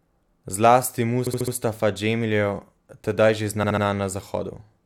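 Repeated frames occur twice in this speech. From 1.26 to 1.53 s, a block of about 70 ms, which fits a run of three compressed frames, plays four extra times. From 3.62 to 3.83 s, the same size of block repeats three extra times. Each is a rapid stutter that adds 279 ms and 209 ms. Unlike a dropout, nothing goes missing. The identical block is played again and the sound gets longer.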